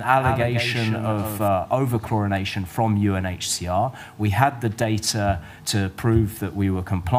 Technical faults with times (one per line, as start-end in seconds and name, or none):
0.00-1.48 doubled audio track